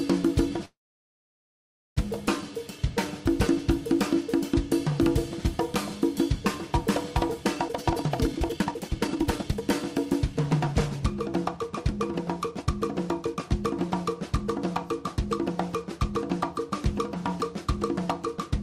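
A call audio freeze runs from 0.65 to 1.99 s. The last sound is briefly extended, then about 1.23 s of silence, likely from delayed packets emptying the jitter buffer, before the audio resumes unchanged. A jitter buffer speed-up follows from 7.68 to 9.62 s at 160% speed, cutting about a second, then from 10.06 to 11.00 s at 106%, cutting roughly 70 ms. Both times short pieces are trimmed repeatedly at unchanged pitch to shrink an overfilled buffer.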